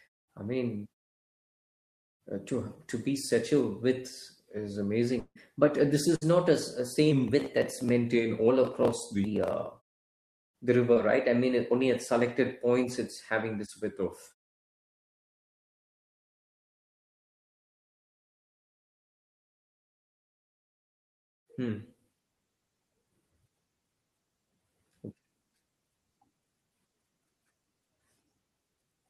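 At 5.19 s, right after "such a width is", the last sound is held as a fading buzz or hiss for roughly 110 ms, followed by about 50 ms of near-silence before audio resumes at 5.37 s with that stretch gone. This is likely a long network dropout: the receiver extended what it had until nothing more remained to extend.

From 6.15 to 6.23 s, between "uh this" and "not a", a burst of packet loss removes about 60 ms. The decoder continues the preceding sound and turns it down across the gap, giving a short decaying buzz or hiss, and the audio then picks up further on.

At 10.93 to 10.98 s, just before "right I mean only", a short concealed packet loss of about 20 ms is covered by roughly 25 ms of synthesised continuation blended back into the real signal. It is audible as a brief smear or wobble, while the muted pauses between phrases fade cleanly to silence.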